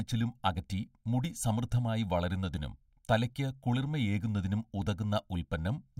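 Throughout the speech, channel delay (comb filtering) is present. One channel lags the other by roughly a millisecond and a half before the mono sum, so shared content cancels at evenly spaced frequencies from around 400 Hz upward, leaving the speech hollow and phasey.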